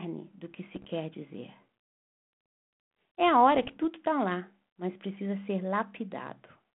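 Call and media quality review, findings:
Bit errors on an ADPCM link, 0.73–0.87 s, right after "do que": flipped bits in the 32 kbit/s G.726 stream throw off the decoder's step size and predictor. The result is pops and a rough, level-jumping burst ringing on.

Same ADPCM bit-error fault, 3.55–3.78 s, just before "está lá mas precisa": a denser error run, under half a percent, spans a longer stretch. Crackly bursts and brief loudness swings are heard within the 150–3400 Hz line band.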